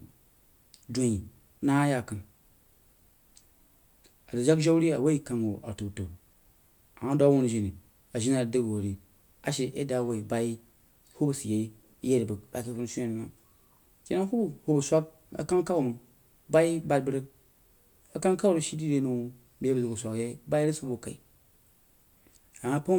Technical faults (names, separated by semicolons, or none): none